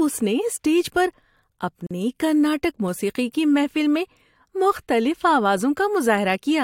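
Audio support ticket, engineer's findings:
Gap at a join of encoded pieces, 1.87–1.91 s: 41 ms silence before "کرناٹک موسیقی کی محفل". Untrimmed encoder delay and padding at splice. Waveform flatlines; spectrogram shows blank vertical band.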